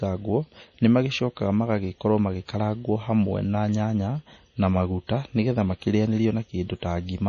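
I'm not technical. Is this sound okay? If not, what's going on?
No. Throughout the whole clip, the speech shows signs of heavy MP3 compression, which is likely the cause of what you hear. To shrink the file, this kind of encoding throws away detail it judges you won't miss. Here it discarded everything above about 10.5 kHz, so the sound is dull and lacks crispness, and faint details flicker in and out, giving a watery, swirly quality with metallic edges on s sounds.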